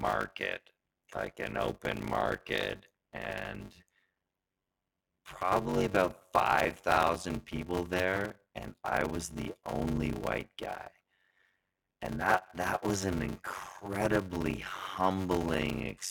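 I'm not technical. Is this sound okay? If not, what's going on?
No. Block size mismatch (padded), throughout: each chunk of sound arrives part-empty, which fits a 512-sample block. The silent gaps cause a 93.8 Hz buzz and slow the speech to 0.625 speed.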